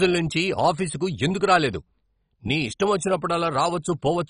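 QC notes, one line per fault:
Throughout: MP2 compression, heavy. The speech sounds dull, with nothing above about 10.4 kHz, and carries a gurgling, granular texture, likely from a low bitrate near 32 kbps starving the sub-bands, so upper bands switch off and flicker while the remaining bands are coarsely quantised.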